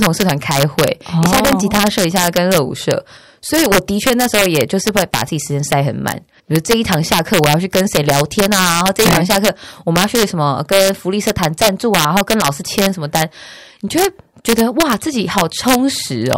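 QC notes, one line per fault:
Throughout: integer overflow, violent cracks on the loudest speech peaks, sharper than clipping, as samples pushed about 5 dB past full scale wrap to the opposite sign instead of limiting.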